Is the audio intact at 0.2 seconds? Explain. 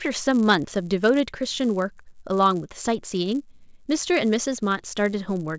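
No. The speech carries a resampler restarted on every block, throughout. Each 10 ms block is converted alone, so its edges err, giving a 100 Hz buzz under the speech.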